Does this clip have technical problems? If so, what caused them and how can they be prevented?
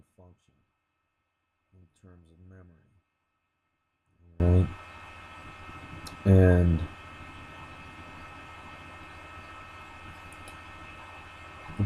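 Yes. From 0.0 to 4.4 s the sound almost vanishes, about 33 dB down. The likely cause is one channel inverted: reversed polarity on one side cancels the shared content when summed to mono, leaving only the difference. Check polarity before downmixing to mono.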